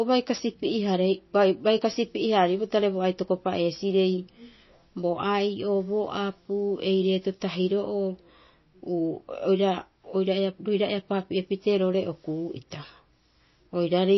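From the start and throughout, the speech has nothing above 5.8 kHz and a watery, swirling texture with smeared consonant attacks, likely from MP3 compression at a low bitrate, around 24 kbps, where the encoder cuts the treble and drops weak frequency lines frame by frame.

Hard clipping occurs at 0.34–0.40 s, 1.69–1.96 s and 3.73–3.80 s, with peaks driven about 8, 4 and 2 dB past the limit. The flattened tops add high harmonics, heard as crackle on those peaks.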